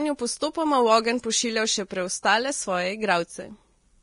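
Throughout, low-bitrate audio was likely saved at a high bitrate as MP3. Nothing remains above 10.6 kHz, so the speech sounds dull.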